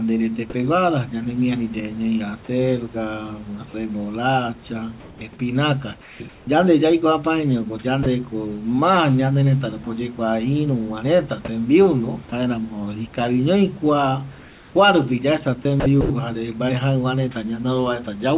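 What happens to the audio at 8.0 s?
Sound dropped by the voice detector at 8.03–8.06 s, before "ma ñanerëta rupi oyekua": likely judged as background, sending stops and 30 ms of steady noise fills the gap.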